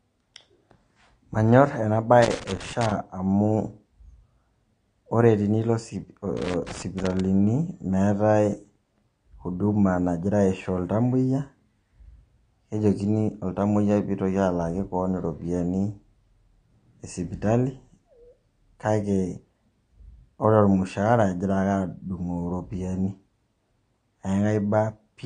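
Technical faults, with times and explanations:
Throughout: AAC compression. The speech is dull and smeared, with nothing above 10 kHz and a warbling, fizzy texture on sustained sounds and sibilants, which fits a bitrate around 32 kbps. The damage is plainly audible. The likely cause is AAC-LC coding, which splits each frame into many frequency lines and quantises them against a model of hearing. At this rate it lowers the cut-off and leaves gaps in the spectrum that blur the detail.
2.22 to 2.92 s and 6.37 to 7.20 s: loose connector crackle. Two irregular bursts of crackle and scratching break into the speech, the first lasting about 0.7 s and the second about 0.8 s. A worn or dirty contact in the signal path makes and breaks rapidly as it shifts, chopping the signal on and off. Any DC on the line adds pops at the breaks.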